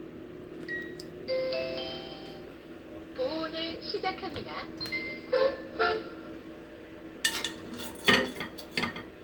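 No technical faults can be heard anywhere in the sound.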